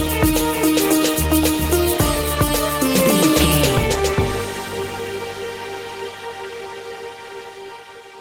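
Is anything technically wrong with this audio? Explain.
No, nothing technically wrong can be heard here.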